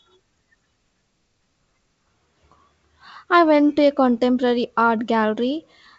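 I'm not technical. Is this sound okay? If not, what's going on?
Yes, this is wideband telephone speech carried by G.722 coding, with nothing above 7.7 kHz as that phone link allows, and nothing here needs fixing.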